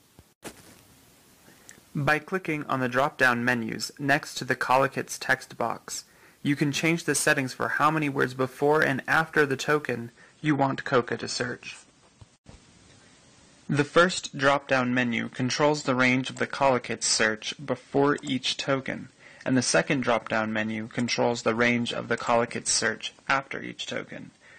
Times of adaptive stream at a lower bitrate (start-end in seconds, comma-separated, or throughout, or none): 10.10-24.58